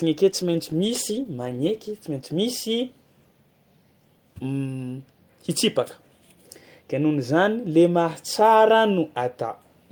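From 0.3 s to 3.27 s the speech turns rough, watery and muffled, worst for about 1.4 s, then clears. This is a call bitrate drop, consistent with a fall from 48 to 15 kbps that forced coarser coding and cut the highs.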